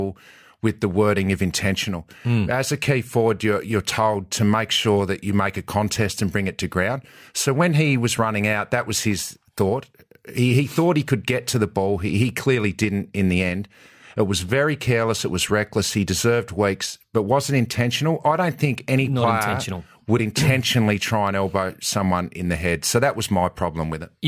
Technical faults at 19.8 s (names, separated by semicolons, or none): none